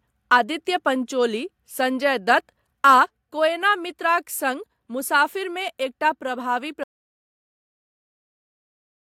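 At 0.32 to 0.37 s, just before "पंचोली संजय दत्त", and again at 2.86 to 2.94 s, after "पंचोली संजय दत्त" and before "कोएना मित्राक सङ्ग मुसाफिरमे", the speech peaks flatten against the converter's limit. This is microphone overload, likely from an input volume set too high for the converter. The tops of the waveform are sliced off by about 2 dB, affecting a few percent of samples in each burst. The result is a short, harsh crackle on the loudest syllables.

At 3.06 s, right after the second overload and just before "कोएना मित्राक सङ्ग मुसाफिरमे", the overall level drops by about 4 dB in a single step. This is a microphone volume stepped down, likely the call software's automatic gain control reacting to the clipped peak by lowering the device input. Voice and background fall together, so the change sounds like an abrupt, uniform dip in loudness rather than a fade.

From 6.83 s to the end, the audio cuts to silence with no room tone. 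This is an audio dropout to silence, likely caused by the input being lost through a disconnection, a failed link or a mute while the recorder kept writing silence. The speech stops mid-flow, and whatever followed is missing.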